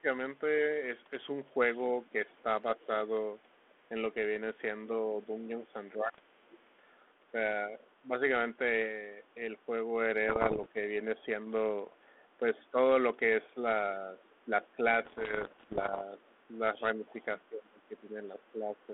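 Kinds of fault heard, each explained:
Speech suppressed in double talk: From 0 to 10.77 s and again from 12.38 s to the end, the talker's speech dips in patches, by up to about 25 dB early and about 15 dB later, likely an echo canceller turning down the talker along with the loudspeaker echo. On a spectrogram the harmonics thin or vanish in those stretches.
Other side's voice leaking through: A second, faint voice sits under the speech at 1.77–2.85, 5.65–7.89, 14.19–14.35 and 16.22–17.13 s, about 25 to 35 dB down, likely residual loudspeaker echo the canceller missed. It shows as weak, separate harmonic traces beneath the main speech.
Bit errors on an ADPCM link: Pops and rough, gritty bursts with brief level jumps land at 6.06–6.20, 10.29–10.66 and 15.02–16.03 s, the last the longest. Flipped bits upset the decoder's step size, so each error rings briefly; the waveform shows spiky bursts and the spectrogram vertical broadband streaks.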